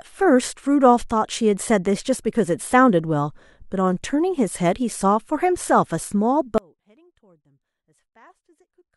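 At 6.58 s the speech suddenly gives way to an audio dropout to a faint residue that lasts to the end of the clip. The signal is most likely lost upstream while the rest of the chain stays live, so only a weak leak of the sound remains, roughly 35 dB below normal. On a waveform the envelope collapses in a vertical step to a thin band. A spectrogram shows the bright energy ending at one sharp edge, with only a pale trace after it.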